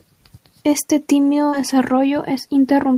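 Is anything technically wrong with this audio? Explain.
Yes. At 1.49 to 1.63 s the speech has a short concealed packet loss: about 40 ms never arrived in time, and the decoder filled 31 ms by extending the preceding sound, adding roughly 15 ms. It comes across as a brief smear or wobble.

Inside that stretch, at 1.52 to 1.54 s, one lost packet was rebuilt from error correction: 20 ms were replayed from the low-bitrate copy carried in the next packet. That frame sounds rougher and noisier, and the spectrogram shows a thin, grainier band.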